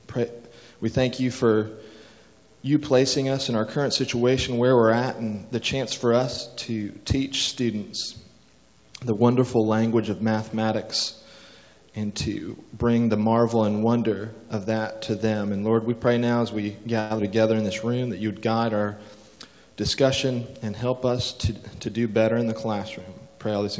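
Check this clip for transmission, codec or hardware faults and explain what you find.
There are three problems, all close together in the second half. They sit on a call path whose band stops at 8 kHz, which fits G.722 at 64 kbps.

From 17.00 to 17.12 s there's a call audio freeze. The sound stalls and the last bit is stretched into a fading buzz for about 102 ms, likely because packets got held up and the jitter buffer ran dry. It then resumes where it left off, so it's a gap inserted rather than lost material.

Right after, from 17.18 to 17.21 s, comes a short concealed packet loss. About 40 ms never made it to the decoder, and the receiver patched it by extending the preceding sound before blending back. You hear a quick smear or wobble, and a little content is gone.

From 19.08 to 19.54 s there's a jitter buffer speed-up. With excess audio queued, the receiver trimmed small pitch-period chunks repeatedly, around 70 ms in total. 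Playback runs at about 113% speed with unchanged pitch, so that stretch sounds noticeably rushed.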